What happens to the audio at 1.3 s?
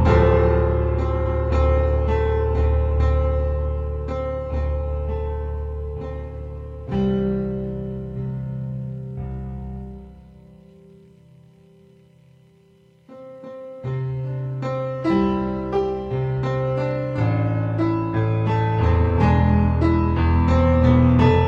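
At 1.3 s there are repeated frames. The 139 ms block from 1.25 to 1.39 s plays a second time, which fits a run of several compressed frames being sent twice. It is heard as a stutter, and the audio runs 139 ms longer.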